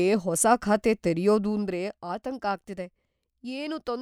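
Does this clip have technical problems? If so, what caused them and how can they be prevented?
Yes. From 1.48 to 2.02 s there is zipper noise: the level falls by roughly 10 dB in coarse unsmoothed steps, about 40 per second, each adding a small click. Unlike a smooth fader move, the drop ticks audibly. Interpolating gain per sample prevents it.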